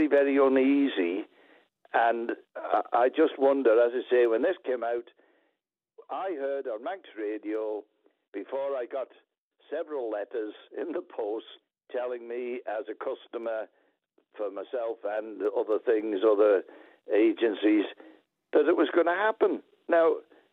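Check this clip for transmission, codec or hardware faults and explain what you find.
Zipper noise appears twice, during two level moves. From 4.16 to 5.12 s the level drops by around 10 dB in 2 dB steps, about five a second, and from 14.76 to 16.2 s it rises by around 10 dB at about four steps a second. Each gain jump lands abruptly, with no smoothing, so every step leaves a faint click and the moves tick audibly. A waveform shows a staircase envelope, and a spectrogram shows thin vertical lines at each step.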